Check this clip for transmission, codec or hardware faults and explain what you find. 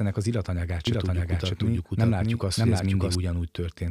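One fault: a doubled audio track from 0.87 to 3.15 s, after "ennek az illatanyagát". A second, likely slower capture path mixes in a full-band copy, about as loud, trailing roughly 0.7 s behind, abruptly starting and stopping.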